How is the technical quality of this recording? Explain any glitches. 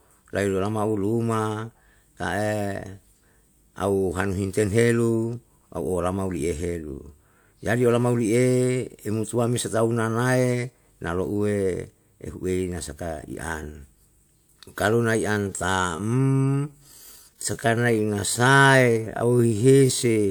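The recording has one glitch near the end. A time-stretched section runs from 15.26 s to 20.30 s: the speech abruptly slows to about 0.66 times its pace at unchanged pitch, likely from software repeating short pieces, so it drags.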